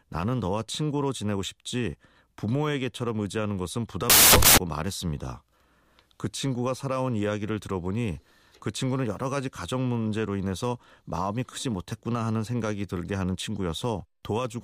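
A speech recording in which, from 4.10 to 4.58 s, the reader assembles each sample from the wrong bytes, so the rapidly fluctuating low-order bits land in the high-order position of every value. For those 0.48 s the speech is replaced by loud, harsh broadband noise, before the audio returns intact once correct byte alignment resumes.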